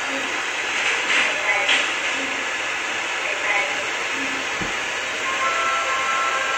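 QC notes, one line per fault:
No faults found in this clip. Nothing to log.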